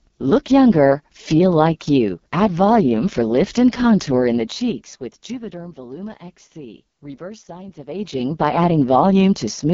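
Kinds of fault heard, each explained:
AMR wideband (HD Voice) codec: heavy coding at the lowest rate, which fits 6.6 kbit/s, leaves the speech rough and raspy, and nothing comes through above 7.1 kHz.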